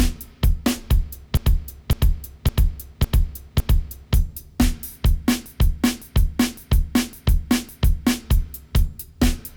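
From 1.37 to 4.16 s, and again from 5.46 to 8.25 s, there are repeated frames. A 0.56 s block, which fits a run of about six compressed frames, plays five extra times, adding 2.79 s in each run and producing a looping stutter. The waveform and spectrogram show identical tiled blocks.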